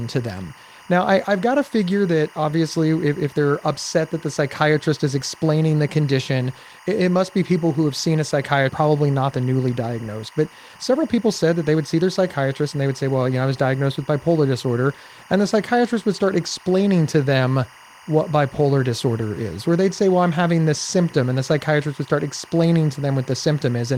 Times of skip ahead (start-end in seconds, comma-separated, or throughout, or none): 8.69